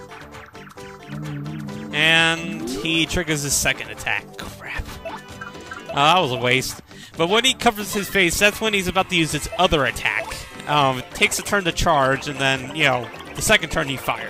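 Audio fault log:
No faults detected.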